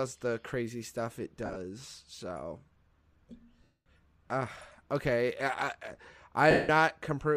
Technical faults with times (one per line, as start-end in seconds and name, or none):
1.46-1.57 lost LE Audio frames
3.63-3.86 lost LE Audio frames
6.51-6.69 lost LE Audio frames